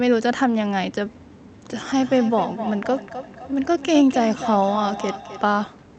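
From 1.85 to 5.72 s, feedback echo between two devices sends the speech back roughly every third of a second, thinning and ringing, peaking about 11 dB below the voice, unlike single room echo.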